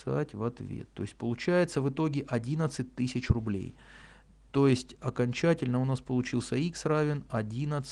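No technical faults can be heard anywhere in the clip. Nothing in the sound points to a problem in how it was captured, processed or delivered.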